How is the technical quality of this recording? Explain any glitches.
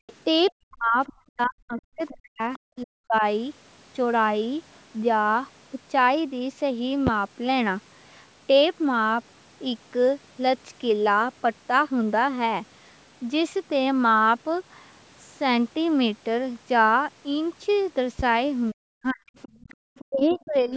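The recording has clear call-path faults, mostly at the start and end, with two pops in between.

Background gated by the echo canceller: At 0.00 to 0.07 s the room sound drops by about 35 dB. At 19.57 to 19.77 s it dips by about 16 dB. The canceller clamped the microphone while the loudspeaker played.

Other side's voice leaking through: From 0.07 to 2.58 s and 19.42 to 20.49 s, a second voice sits about 20 dB below the speech. This is likely loudspeaker sound the echo canceller failed to remove.

Speech suppressed in double talk: From 0.57 to 3.23 s and 18.72 to 20.74 s, the speech dips deeply. Both sides likely talked at once, so the canceller turned everything down.

Loud pop: Sharp pops land at 7.07 to 7.10 s, about 15 dB above the signal, and at 18.19 to 18.22 s, about 10 dB above. The speech carries on underneath. A voltage step from a plug, switch or static is the likely cause.

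The call's microphone processing, with nothing above 8 kHz, is normal.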